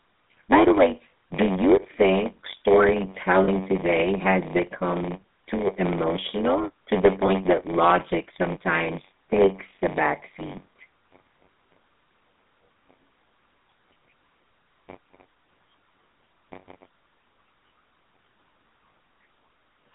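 Block size mismatch (padded), throughout: one stage hands over shorter blocks than the next stage reads, which fits a 512-sample read, and the shortfall in each block is filled with zeros. That silent slice recurs in every block, so a steady buzz at 93.8 Hz sits under the speech. The whole clip runs slower by a factor of 0.938, while the timbre stays.

GSM full-rate codec, also throughout: the speech has passed through the original GSM coder. The roughness fits its 13 kbps rate. The coder rebuilds each stretch from a vocal-tract model excited by sparse, regularly spaced pulses, which gives the plainly audible buzzy, gravelly grain. The line band runs only from about 200 Hz to 3.6 kHz, so the sound is thin at the bottom and dull at the top.

Lost GSM frames, at 3.44 to 3.49 s, just before "today has become too", and at 7.26 to 7.30 s, between "too emotional to the" and "that logic sometimes takes": the decoder had no good data and reused the last good frame's settings. 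Each gap is heard as a brief, rough metallic ring rather than silence. The first lasts 40 ms and the second 20 ms, which fits two lost 20 ms frames and one.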